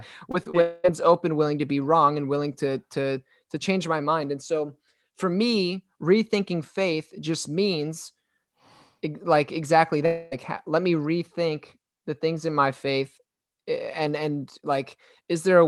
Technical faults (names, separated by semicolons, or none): short concealed packet loss; long network dropout